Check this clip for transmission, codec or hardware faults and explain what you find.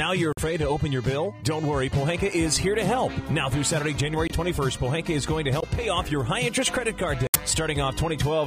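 Three short dropouts are audible, all corrupt frame muted faults, at 0.33 to 0.40 s, 4.27 to 4.32 s and 7.27 to 7.36 s. Damaged compressed frames were rejected by the decoder and replaced with silence, leaving abrupt holes without any timing shift. On a waveform they appear as flat silent gaps with sharp edges, and on a spectrogram as blank vertical bands spanning all frequencies.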